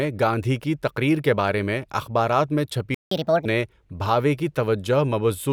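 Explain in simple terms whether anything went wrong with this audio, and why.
Two things go wrong, one right after the other. At 2.94 s the speech just stops dead for about 0.17 s, until 3.11 s. That's a playback stall: the player most likely ran out of data or got held up, so nothing came out until it recovered.

Then, from 3.11 to 3.45 s, you get the catch-up at higher speed. The player rushes through what piled up, playing it 1.5 times too fast, so the speech sounds hurried and chipmunky, pitched up roughly seven semitones, before it settles back to normal.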